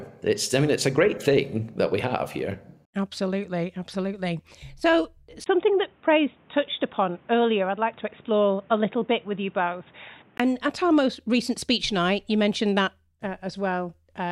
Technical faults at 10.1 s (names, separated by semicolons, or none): input switched to a poorer device